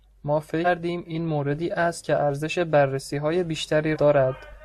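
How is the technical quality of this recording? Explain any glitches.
The speech has compressed frames skipped at 0.64–0.67 s, 2.00–2.03 s and 3.92–3.97 s. Whole blocks of coded audio were lost or rejected by the decoder, so playback jumps ahead by roughly 300 ms, 100 ms and 200 ms, consistent with multiples of a 42.7 ms frame. Each join is an abrupt jump forward in the speech.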